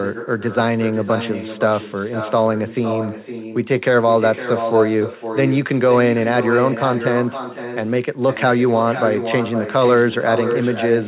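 Throughout the speech, an echo with no canceller repeats every phrase roughly half a second later, about 10 dB quieter and thinner, within a band cut off at 4 kHz. Unlike room reverberation, which smears into the sound, this returns as a distinct delayed copy.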